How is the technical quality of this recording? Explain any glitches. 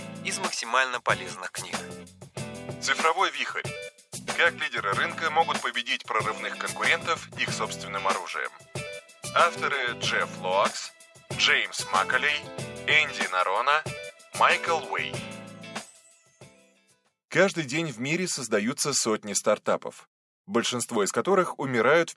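No glitches can be heard anywhere in the recording, and the signal stays continuous and steady throughout.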